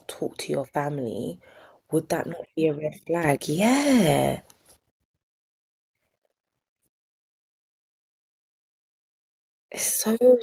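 At 3.24 s the microphone volume is stepped up: the calling software judged the input too quiet and raised the device's input volume by about 7 dB in a single step. The level jumps abruptly, and the background noise rises by the same amount. That shared jump is what separates it from automatic gain control on the speech alone, which ramps gradually and leaves the noise floor where it was.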